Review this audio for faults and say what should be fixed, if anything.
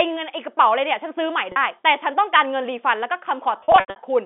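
Packet loss with pitch repetition appears twice in this speech: briefly at 1.52 to 1.56 s, where 40 ms of audio is bridged by a repeated pitch period and sounds like a slightly held, buzzy tone; and from 3.60 to 3.96 s, where losses scattered over 360 ms (longest run 80 ms) cause repeated buzzy stretches fading toward silence. On a spectrogram these show as frozen harmonic bands. Bursts of missing 20 ms packets are the likely cause. A larger jitter buffer or forward error correction on the G.711 telephone link would prevent this.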